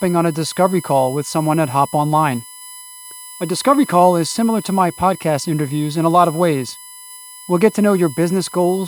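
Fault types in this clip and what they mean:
USB whine: There's a steady, fixed-pitch whine under the speech the whole way through, built on 1 kHz, which is the 1 ms frame rate of a USB bus. The current the bus draws on each frame is getting into the audio through power or ground, and it's piling up in the harmonics, with the strongest part at 11 kHz. The whine sits roughly 20 dB below the speech.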